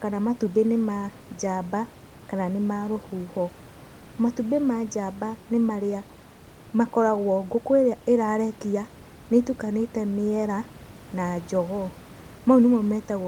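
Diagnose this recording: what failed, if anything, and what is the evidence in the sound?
No fault found here.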